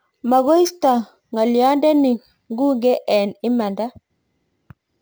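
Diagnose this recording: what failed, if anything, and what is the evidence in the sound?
Imaging from sample-and-hold upsampling, at the sample-rate conversion stage, runs throughout: a metallic fizz tracks the speech level, sitting about 27 dB down, between 12 and 24 kHz. That fits a 24 kHz source raised to 44.1 kHz by repeating samples without smoothing, mirroring the spectrum.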